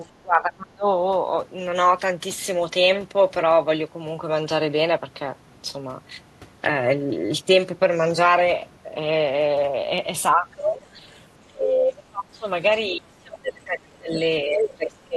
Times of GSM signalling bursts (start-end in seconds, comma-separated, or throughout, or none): none